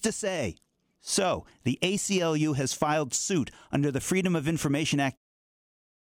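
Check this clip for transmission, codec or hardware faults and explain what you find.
No transmission, codec or hardware faults can be heard in this speech recording, and the smooth fade-out that begins around 5 s and is complete by 5.18 s is an ordinary editing choice rather than a defect.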